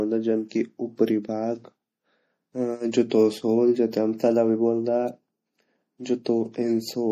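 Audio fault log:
throughout: MP3 compression, likely at a low bitrate around 40 kbps; treble is cut above 15.2 kHz and weak lines flicker, giving speech a plainly audible watery, swirly edge.
0.49–0.51 s, 2.91–2.93 s, 3.10–3.11 s: pre-echo, block-spread quantisation noise smears 17 to 27 ms ahead of attacks before "की ऊपरी" and "सोल जू", heard as brief hiss.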